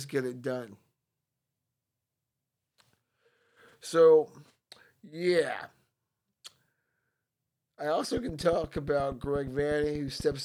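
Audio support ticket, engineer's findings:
Train of clicks, 8.17–10.33 s, speech track. Regular ticking at 8.4 clicks/s, about twenty near-identical pulses, peaking about 5 dB above the signal. Likely nearby equipment interference or a faulty connection or power supply injecting periodic pulses. Audible over speech and in gaps.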